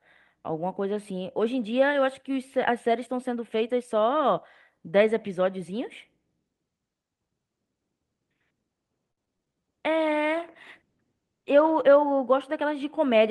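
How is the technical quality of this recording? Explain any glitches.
Two faults stand out, both late in the clip.

From 9.11 to 9.61 s there is repeated packet loss, giving a robotic sound. Four gaps open in quick succession, the longest about 59 ms. Each is filled by stretching the previous sound, so nearly a third of that half-second is patched. It sounds choppy.

From 9.90 to 11.93 s comes a call bitrate drop. The sound turns coarse, rough and muffled for about two seconds. It points to the encoder being pushed from roughly 32 to 17 kbps. At that rate it codes detail crudely and trims the highs.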